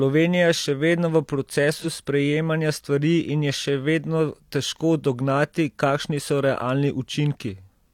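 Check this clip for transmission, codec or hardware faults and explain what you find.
One codec fault is present. From 1.74 to 1.86 s, between "je še vedno v" and "sprejemanja stvari in je", a brief smeared, noisy patch blurs the speech. This is AAC frame loss with concealment: about 43 ms of data went missing, which fits a single lost frame, and the decoder patched the gap by reusing the last good spectrum.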